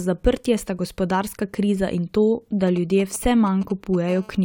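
It's a speech clip, and from 2.67 to 3.96 s you get GSM signalling bursts: a galloping dit-dit-dit of short 217 Hz buzzes, sitting roughly 20 dB under the speech. Right after, from 4.09 to 4.40 s, a steady GSM phone buzz takes over, a hard, raspy 217 Hz tone about 23 dB below the speech. That's a 2G handset transmitting in bursts 217 times a second as in a call, its radio pulses getting rectified by the audio circuitry.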